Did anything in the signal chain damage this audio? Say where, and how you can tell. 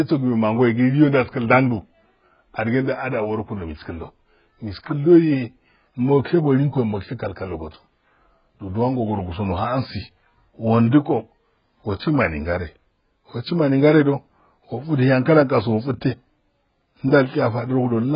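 Yes. Throughout the speech, everything above 5.1 kHz is missing, leaving the sound dull, with a smeared, warbling texture on sibilants. A spectrogram shows a hard ceiling and patchy holes below it. The likely cause is heavy AAC compression at a very low bitrate.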